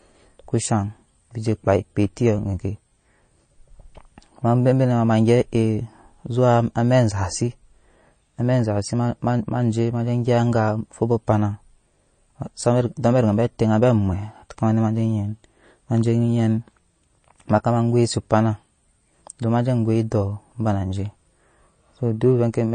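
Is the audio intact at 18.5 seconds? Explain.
No. Throughout the clip, nothing above 9 kHz remains and the speech sounds watery, which points to MP3 compression at a low bitrate, likely around 32 kbps.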